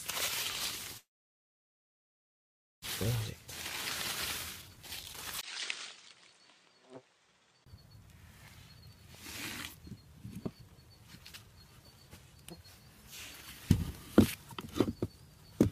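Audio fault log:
0.97–2.86 s, long network dropout: sound fades to near silence for about 1.8 s and resumes with about a second missing, likely from audio that stopped arriving.
4.62–5.15 s, jitter buffer speed-up: sound hurries to 132% speed at unchanged pitch as short pitch-period pieces, about 150 ms in all, are cut to drain excess buffering.
5.41–7.66 s, input switched to a poorer device: after a 20 ms gap, sound turns duller with nothing above 9.1 kHz, about 5 dB quieter, with noise about 30 dB down, likely a poorer input.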